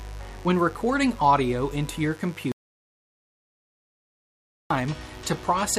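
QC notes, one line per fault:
throughout: mains buzz at 50 Hz, sitting roughly 25 dB below the sound. Unlike a smooth hum, it is raspy, because sharp switching spikes repeating twice per mains cycle produce harmonics extending to several kHz, so it cannot be removed with a single low notch.
2.52–4.70 s: audio dropout to silence, about 2.19 s long. The sound cuts off abruptly and returns mid-flow, with silence and no room tone in between. A gate or fade would leave some residual noise. The likely cause is a lost input while recording continued.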